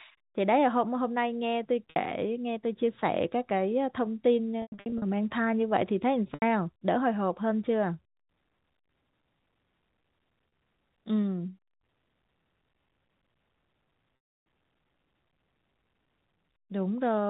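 Packet loss with pitch repetition occurs at 1.90 s, 4.62–5.02 s, 6.34 s, 10.48 s and 14.16–14.46 s. Missing audio is bridged by repeating the last pitch period. The 40–80 ms gaps sound like a briefly held buzzy tone. The 300 ms gap fades to silence before the speech cross-fades back. The losses at 4.62 s are scattered across 400 ms, with the longest run lasting 100 ms. Through all of it, the telephone band is narrow, as G.711 keeps nothing above 4 kHz.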